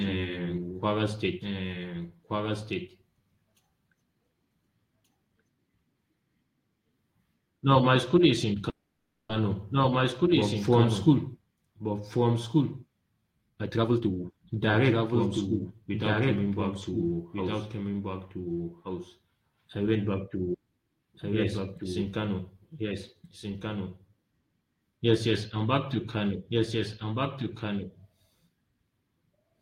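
Speech with three faults. Throughout, a doubled audio track runs: a full-band copy about 5 dB quieter trails the original by roughly one and a half seconds, likely from the sound being captured twice by paths of different speed. On a spectrogram, every pattern reappears as a fainter, identical copy shifted right by that fixed interval, with no smearing or reverb tail. From 8.69 to 9.31 s there is a call audio freeze. The last sound is stretched into a fading buzz, with about 90 ms of true silence, before the speech resumes where it stopped. The likely cause is delayed packets draining the jitter buffer, and nothing is lost. The waveform shows a repeated, decaying stretch and a 0.6 s shift of everything afterwards. From 13.49 to 16.21 s, just before "coming back to house", a jitter buffer speed-up plays the speech at 122% of normal speed while keeping its pitch. Around 0.7 s in total is trimmed as many tiny pitch-period cuts. 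Syllables on the spectrogram appear compressed in time while the harmonic spacing stays unchanged.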